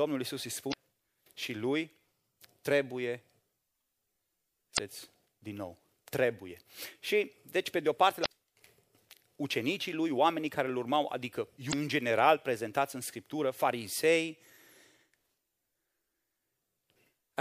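Short glitches of about 45 ms break into the speech at 0.70, 4.74, 8.22 and 11.69 s. They come from damaged data in the compressed stream: the decoder misreads corrupted frames, loses sync and searches for the next valid frame header.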